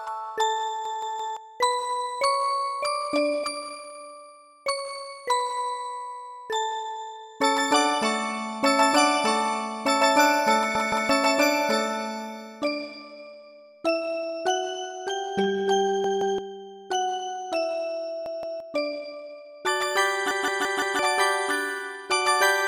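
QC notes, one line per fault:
0.85–1.37 s, 10.75–11.09 s, 16.04–16.38 s, 18.26–18.60 s, 20.31–20.99 s: repeated buffer. Fresh audio arrived late, so the same roughly 170 ms chunk (consistent with an 8192-sample buffer) replays two to four times with hard joins, giving a short stutter.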